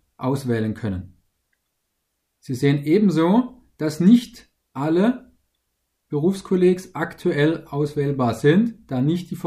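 No technical faults are audible.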